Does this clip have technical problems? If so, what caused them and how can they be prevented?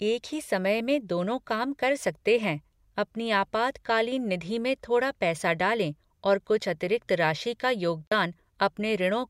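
Yes. There is AAC frame loss with muting from 8.07 to 8.12 s. Part of the encoded stream went missing, and the decoder filled the gap by setting that stretch of spectrum to zero. The result is a hole of about 43 ms, which fits two lost frames. Because AAC frames overlap, the sound fades out and back in across the gap rather than stopping abruptly. Protecting the transport with retransmission or forward error correction would prevent the loss.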